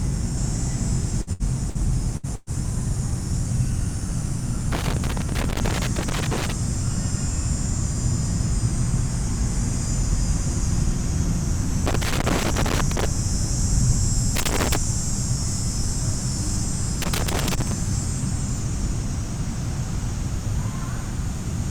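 Between 1.21 and 2.50 s there is a burst of packet loss, five times: 1.21–1.30, 1.33–1.43, 1.70–1.78, 2.17–2.26 and 2.35–2.50 s. About 60 ms of audio goes missing each time, 120 ms in the last. The receiver stretches the preceding sound and fades it. The audio then jumps ahead.

Loose connector crackle follows at 4.72–6.52, 11.87–13.05, 14.36–14.76 and 17.02–17.72 s. A worn or dirty contact keeps making and breaking. The signal is chopped into fragments. Each stretch sounds like irregular scratching over the audio.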